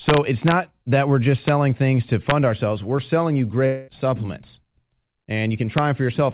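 Speech, heard through a call path with nothing above 4 kHz, which fits a narrowband G.711 mu-law link. Integer overflow causes violent cracks at 0.09 to 0.52 s before "that we're just", at 1.48 s before "things to", at 2.30 s after "things to", and at 5.78 s. Peaks pushed about 0 to 2 dB past the integer limit wrap to the opposite sign instead of being limited. The cracks are far sharper than clipping. From 3.66 to 3.90 s, about 220 ms of audio is missing, likely from a long network dropout. The receiver fills almost the whole gap by stretching the last sound into a fading buzz or hiss. The speech then resumes further on, without the lost part.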